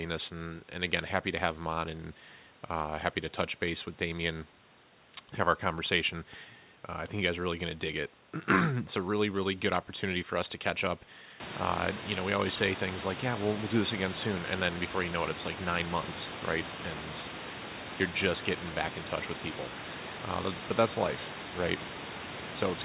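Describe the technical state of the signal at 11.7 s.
At 11.7 s the speech is intact, with no fault in the signal at that moment.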